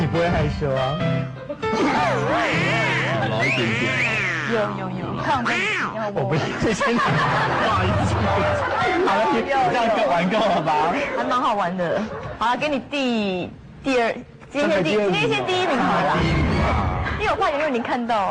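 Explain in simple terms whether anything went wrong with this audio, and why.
At 1.97 to 1.99 s the sound suddenly jumps forward, with roughly a second of audio missing and the two sides joined almost directly, with no gap. This is a skip ahead: a stretch was dropped in transit or by an overflowing jitter buffer while later audio was already waiting.

From 9.21 to 10.70 s the audio plays at 103% speed, and from 12.45 to 13.09 s at 105%, with the pitch unchanged. This is a jitter buffer speed-up. The receiver was holding more audio than it aims for. To cut that delay it removed many short pieces, about 50 ms in total in the first stretch and about 40 ms in the second.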